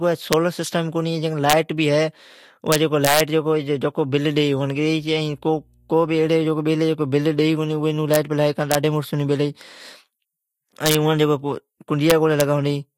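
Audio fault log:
0.33, 1.50 to 1.53, 2.72 to 3.20, 8.14, 8.72 to 8.75, 10.86 to 10.95, 12.10 to 12.41 s: integer overflow. Speech peaks pushed up to about 5 dB past full scale wrap to the opposite sign, giving violent cracks far harsher than clipping's flattened buzz.
4.95 to 6.45 s: mains hum, a faint steady 60 Hz tone well below the speech, with low harmonics. The fixed pitch distinguishes it from rumble or wind noise.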